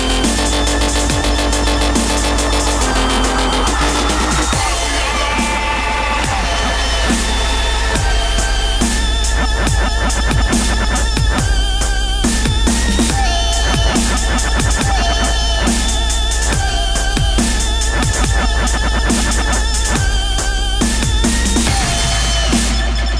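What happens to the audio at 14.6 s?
Nothing goes wrong at 14.6 s: the audio plays through that moment intact, with no dropout, click, distortion or other fault.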